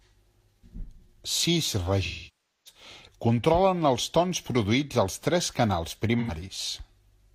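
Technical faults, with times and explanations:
2.05 to 2.81 s, AAC frame loss with concealment: about 0.6 s of missing frames is filled from the last good spectrum, so the speech smears, then decays toward silence and fades back. On a spectrogram the harmonics blur into a fading smear; the waveform envelope sags.
6.20 to 6.31 s, AAC frame loss with concealment: right after "produïts als tres canals", an 85 ms gap, consistent with two lost frames, becomes a brief noisy, phasey smear from the repeated spectrum. On a spectrogram it is a short blurred block without clear harmonics.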